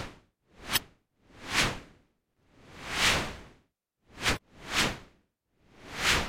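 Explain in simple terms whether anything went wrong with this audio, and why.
Two kinds of fault occur.

The first is damaged data in a compressed stream, heard twice, from 0.73 to 0.78 s and from 4.33 to 4.38 s. A small patch of the stored or transmitted file was corrupted, so the player could not read those pieces correctly. It lost its place and had to hunt for the next readable section. Each time, the sound gives a brief chirp or blip lasting only a few hundredths of a second.

The second is loose connector crackle, from 2.30 to 2.44 s. A plug or socket in the signal path was making poor contact, so the connection flickered on and off very quickly. That chopping of the signal comes through as a short, rough burst of crackling or scratching, about a seventh of a second long.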